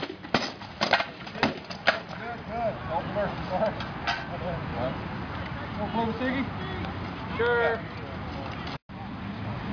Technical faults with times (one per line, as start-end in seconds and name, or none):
none